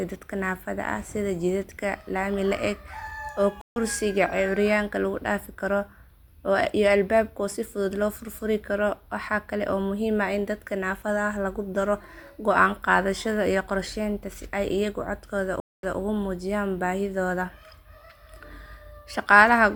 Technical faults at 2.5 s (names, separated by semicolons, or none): none